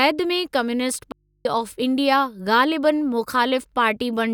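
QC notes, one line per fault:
1.12–1.45 s, audio dropout to a faint residue: the speech signal likely cut out for 330 ms while the path stayed live, leaving only mains hum roughly 45 dB down.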